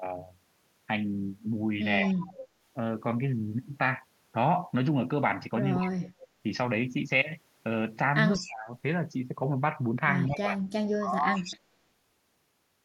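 From 2.06 to 2.47 s there is an echo leak. A faint copy of the speech trails by 185 ms, roughly 15 dB down. The cause is likely loudspeaker pickup the echo canceller missed.

From 5.76 to 6.28 s the speech is suppressed in double talk. It dips deeply, by around 35 dB, for about half a second. This is likely the canceller turning down its own talker along with the echo. A brief, very quiet echo slips through at 6.21 s.

At 8.33 to 8.50 s a louder echo leak appears, roughly 10 dB down, again 185 ms behind, likely from the same source. From 8.37 to 8.71 s the speech drops by around 25 dB, likely double-talk suppression.

From 10.26 to 11.56 s the echo leak returns, about 15 dB down, likely the same missed pickup. From 10.28 to 11.43 s the speech is suppressed in double talk, dropping around 25 dB in patches. The likely cause is again the canceller turning down its own talker along with the echo.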